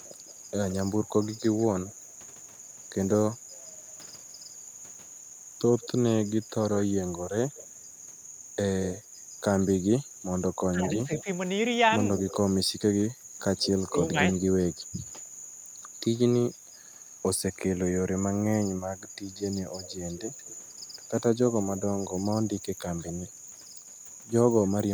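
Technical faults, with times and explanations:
0.04–12.35 s, 13.56–17.81 s and 19.0–24.7 s, echo leak: a faint delayed copy of the speech trails the original, lagging by 173 ms in the first stretch, 180 ms in the second and 185 ms in the third. It sits about 20 dB below the speech at first and about 25 dB below later. This is likely a far end on loudspeaker whose echo canceller let part of the microphone pickup through and sent it back.
10.75–11.27 s and 21.53–22.2 s, speech suppressed in double talk: the speech dips by about 10 dB in short bursts, adding up to around a fifth of a second in the first span and under a tenth of a second in the second. Both ends are talking at once here, and the likely cause is an echo canceller that mistook the overlap for echo and attenuated the talker along with it.
13.15–13.28 s, background gated by the echo canceller: the room sound drops by about 9 dB for roughly 150 ms and then comes back. 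The echo canceller clamped the microphone down while the loudspeaker was active, pulling the background ambience out with it. The ambience returns as soon as the canceller releases, which produces the brief hole in the room tone.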